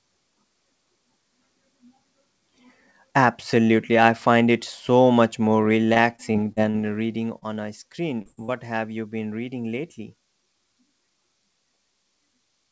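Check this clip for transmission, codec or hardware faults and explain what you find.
Yes, there are clear transmission faults, all packet loss on what sounds like a wideband call path, with nothing above 8 kHz, clustered between about 6 and 8.5 s.

From 5.94 to 6.76 s there's repeated packet loss, which gives a robotic sound. Five separate gaps hit that stretch, none longer than 40 ms, and each one got patched by stretching out whatever sound came just before it. About 140 ms of real audio is missing, and roughly a sixth of the span is made-up filler. Because the holes come so close together, the speech turns choppy and robotic instead of just blipping once.

Then there are three short concealed packet losses, at 7.38 to 7.44 s, 8.22 to 8.27 s and 8.45 to 8.50 s. Each drops about 40 ms, and the receiver covers it with a few tens of milliseconds of extrapolated sound, pitch-continued or noise-shaped depending on what was there, before blending back into the real signal. 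You hear a quick smear or wobble, and any short consonant that landed in the gap is simply gone.

Sandwiched between the last two is a burst of packet loss from 8.31 to 8.39 s. That's about 60 ms lost in one go, longer than the single drops. The concealment holds the last sound and fades it as the gap runs on, so it comes out as a brief held buzz or fading hiss, and then the speech picks up a little further along with that bit skipped. It comes right after one of the other drops and just before the next.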